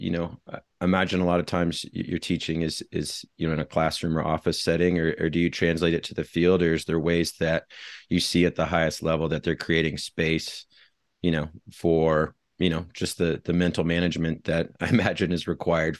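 No technical faults are audible.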